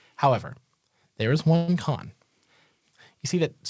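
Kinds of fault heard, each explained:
Call audio freeze: Right after "there is", from about 1.56 to 1.70 s, the speech stalls and the last sound gets stretched into a short fading buzz or hiss for roughly 120 ms instead of dropping to silence. That's likely packets arriving late so the jitter buffer ran dry and the receiver padded the gap. When the speech picks up again, nothing has been skipped; it just runs about 120 ms later than before.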